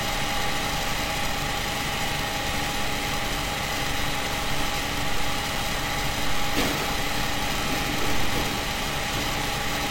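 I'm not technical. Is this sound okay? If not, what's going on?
No, not quite. At about 5.56 s there's a tiny click-like dropout, a gap between stream segments. The audio arrives in 2-second pieces, and two of them don't line up, leaving roughly 3 ms of silence. Nothing is actually lost, just a brief hole.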